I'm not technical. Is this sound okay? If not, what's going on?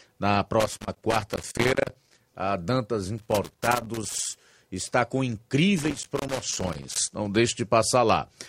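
No. A cable plug or socket in the recording chain has a worn or dirty contact, so the connection keeps cutting in and out whenever it shifts. That is loose connector crackle. It chops up the speech, heard as irregular bursts of scratchy crackling from about 0.60 to 2.26 seconds, 3.18 to 4.36 seconds, and 5.78 to 7.13 seconds.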